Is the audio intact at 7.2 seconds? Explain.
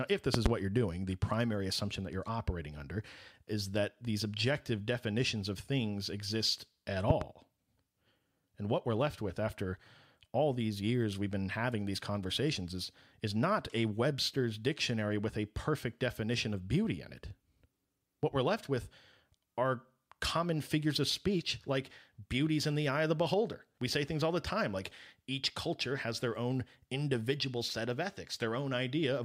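No, there's a loud pop right after "of things exist at", from 7.10 to 7.24 s: two sharp pops in quick succession, roughly 20 dB above the speech, which carries on underneath. That's likely a brief voltage spike, from a plug, switch or static, shaped by the following circuitry.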